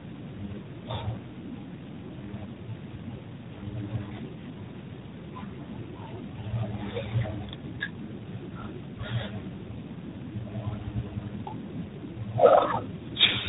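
Throughout, the speech was decoded and re-encoded by four speech codecs in a row, ending in what sounds like low-rate G.726. This is tandem speech coding. Each stage compounds the previous one's damage, leaving nothing above 3.8 kHz and a rough, muffled, warbly voice.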